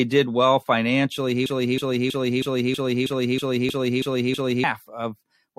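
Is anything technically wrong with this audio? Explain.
Yes, the speech has two faults.

The broken-record loop runs from 1.46 s to 4.64 s. The player or stream likely stalled and kept sending the last fragment it held. A stretch of about 0.32 s repeats exactly, back to back, ten times. For more than three seconds the same sliver cycles mechanically. The speech that should have filled that span is lost.

The overlap between stream segments falls at 3.69 to 3.73 s, just after "did well". Two segments carried time stamps that overlapped, and the player discarded the overlapping portion even though that sound was not actually duplicated. About 39 ms drops out and the waveform jumps across the gap. It is heard as a tiny skip.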